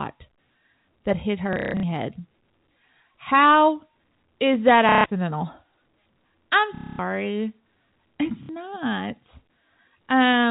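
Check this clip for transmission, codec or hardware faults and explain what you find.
There is one transmission fault in this speech: packet loss with last packet repeated, at 1.53–1.83 s after "that hit", 4.89–5.04 s after "is that", 6.75–6.99 s, and 8.43–8.49 s. Packets dropped in transit and the receiver replayed the last good one until new ones arrived. The losses fit 30 ms packets. The replays give a robotic stutter buzzing near 33 Hz. The telephone band of the G.711 coding is audible beneath.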